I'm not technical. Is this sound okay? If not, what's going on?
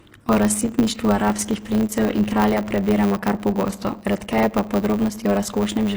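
No. Throughout the speech, the s sounds turn gritty and lispy, likely from HE-AAC compression rebuilding the treble rather than keeping it. A steady buzz at 100 Hz runs underneath, and the talking runs about 7% fast with the voice's character kept, unlike a sped-up tape. That points to a block size mismatch (truncated), where each chunk's end is cut off.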